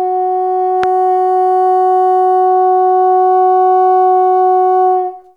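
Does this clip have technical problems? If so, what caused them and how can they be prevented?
Yes. At 0.84 s a single loud pop, peaking about 10 dB above the music, is likely a voltage pulse from a plug, switch or static discharge. The music continues uninterrupted beneath it, which separates it from a dropout or buffer glitch. Secure connections and mute outputs before switching.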